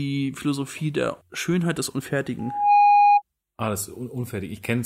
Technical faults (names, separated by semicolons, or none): loudspeaker feedback squeal